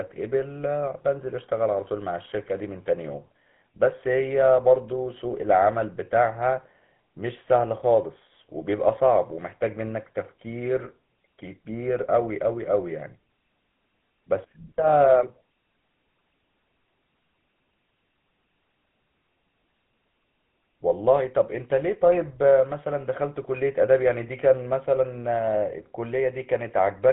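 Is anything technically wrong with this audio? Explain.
Yes. Throughout, the speech has a buzzy, gravelly roughness and nothing above 3.8 kHz, the mark of the GSM full-rate codec, whose pulse-driven vocal-tract model fits a 13 kbps stream.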